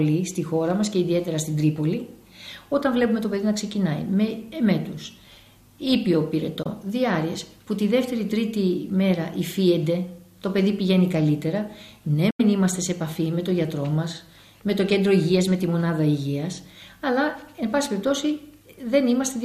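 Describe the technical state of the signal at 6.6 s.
A Bluetooth dropout, likely, from 6.63 to 6.67 s: the signal cuts to silence, consistent with a single late packet being discarded, then resumes further along.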